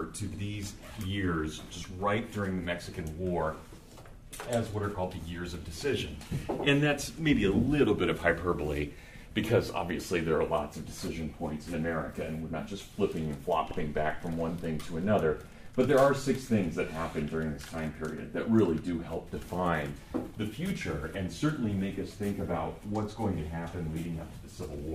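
At 0.34 s and again at 13.71 s, repeated frames appear. Each time, a 64 ms block of compressed audio plays twice, which fits two frames being sent again. The sound stutters briefly, and the audio gains 64 ms each time.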